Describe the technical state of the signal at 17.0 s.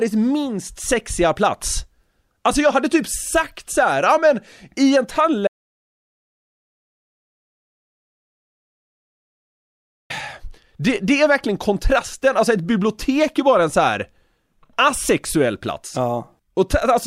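Nothing is wrong with the signal at 17.0 s; the audio is intact at that moment.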